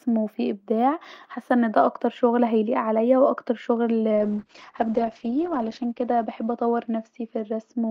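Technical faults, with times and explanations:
4.17 s to the end (7.91 s): call bitrate drop, just after "وان ده اكتر شغل". The speech loses its top end, with the audio band narrowing from 20 kHz to 8 kHz, and turns rough and watery, most severely for about 1.37 s. The sound points to the call's bandwidth estimate collapsing and the Opus encoder being pushed from around 48 kbps down to around 8 kbps, so it codes far more coarsely and discards the high frequencies.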